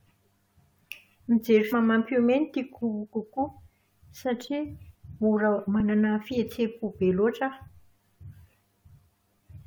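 Damaged data in a compressed stream at 1.72, 4.94 and 7.67 s of this speech: corrupted frames throw the decoder out of sync, leaving brief blips.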